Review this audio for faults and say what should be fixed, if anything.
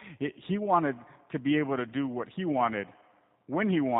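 The speech runs through a G.729 codec from start to finish, and the damage is plainly audible. The codec models each 10 ms frame as a vocal tract filter, a pitch predictor and a few pulses, so nothing above 4 kHz survives and the voice takes on a rough, synthetic buzz. The roughness sets it apart from a simple low-pass filter, and the texture fits an 8 kbit/s stream. To prevent it, capture or transmit with a wideband codec at a higher bitrate.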